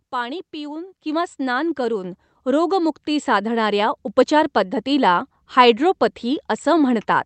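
Microphone volume stepped up at 1.02 s, right after "पाणी पिऊन" and before "किंवा स्नान", and again at 2.04 s, just after "पाणी पिऊन किंवा स्नान". The call software judged the input too quiet and raised the microphone gain in single jumps, about 7 dB and then about 4 dB. The voice and the room noise behind it get louder together at each point, an abrupt change in level.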